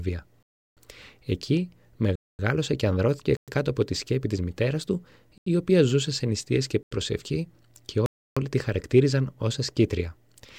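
Blocks of digital silence cut the sound at 0.43 s (0.34 s long), 2.16 s (0.23 s), 3.37 s (0.11 s), 5.38 s and 6.83 s (0.085 s each) and 8.06 s (0.30 s). Each hole drops abruptly to silence, likely where an unfilled output buffer left no samples. Unlike a faded dropout, nothing decays. The two 0.085 s gaps fit 4096-sample blocks.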